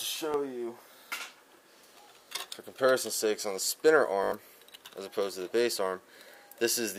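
Repeated buffers at 0.32–0.34 s and 2.26–2.28 s: fresh audio arrived late, so the last 20 ms chunk, which fits a 20 ms buffer, played twice, giving a quick click. At 4.24–4.32 s it repeats four extra times, a short buzzy stutter that swallows a bit of audio.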